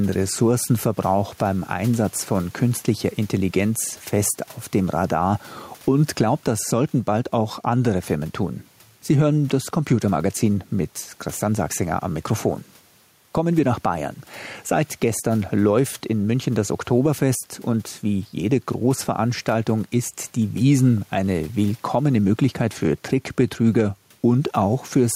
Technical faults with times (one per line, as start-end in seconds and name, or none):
0.00-25.16 gain pumping